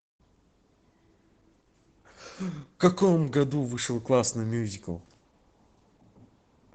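Throughout, Opus voice compression in SILK mode codes the excitation coarsely, leaving the speech hoarse and faintly robotic. The spectrogram shows a flat ceiling at 8 kHz, which fits about 12 kbps.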